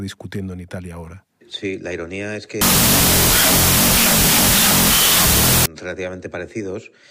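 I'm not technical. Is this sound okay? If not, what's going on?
No. From about 2.61 to 5.66 seconds there is a fault called wrong sample width. The audio was stored in one number format but played back as if it were another. This fits 32-bit float data being read as 16-bit. The numbers come out scrambled. You hear a loud hiss of noise with the speech buried underneath. The speech also plays at half speed, so it sounds slower and an octave lower.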